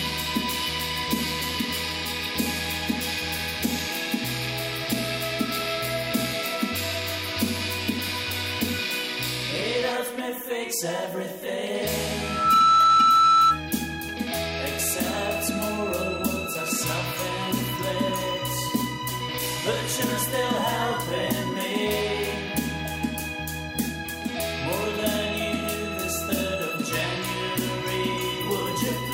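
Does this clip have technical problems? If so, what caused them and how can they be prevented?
Yes. From 12.22 to 13.61 s there is loudspeaker feedback squeal: a single 1.3 kHz tone swells within a few tenths of a second to about 10 dB above the rest of the sound, as the microphone re-captures its own loudspeaker and loop gain at that frequency exceeds one. Unlike a steady interfering whistle, it grows by itself from nothing. Keeping the microphone away from the loudspeaker's path, reducing gain or notching 1.3 kHz prevents it.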